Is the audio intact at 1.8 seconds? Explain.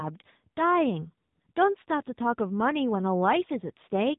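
No. At 1.8 s, as throughout, AMR narrowband mobile codec coding removes everything above 3.8 kHz, and the buzzy, synthetic speech suggests a low rate near 8 kbps.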